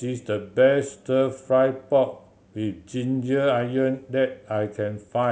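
No technical faults can be heard anywhere in this speech recording. Nothing in it calls for a timestamp or a note on how the signal was handled.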